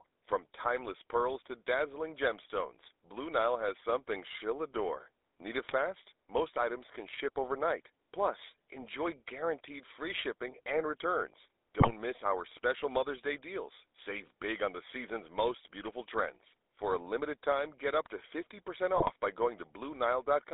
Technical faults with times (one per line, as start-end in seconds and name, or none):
0.00-20.54 GSM full-rate codec
5.64-5.73 GSM bit errors
11.80-11.91 GSM bit errors
18.96-19.12 GSM bit errors